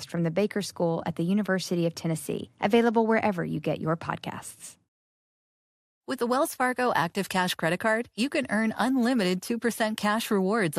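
Throughout, the speech sounds dull and gurgling, likely MP2 compression starving upper sub-bands of bits, which fits a rate around 80 kbps.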